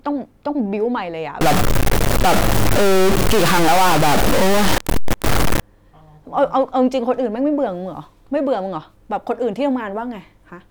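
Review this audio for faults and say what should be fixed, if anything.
From 1.41 to 5.6 s the speech turns harsh and buzzy, and the gaps fill with loud hiss. That points to a stuck bit, likely a high one, throwing about half the samples off by a step around -10 dBFS. To prevent it, check the converter and its data lines.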